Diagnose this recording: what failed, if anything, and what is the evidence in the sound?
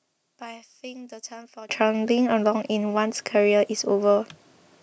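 From the start to 1.69 s the speech drops by about 20 dB and sounds faint. This is one channel inverted. Summed to mono, the shared centre cancels, leaving only the channel difference. The likely cause is a polarity-reversed analogue lead.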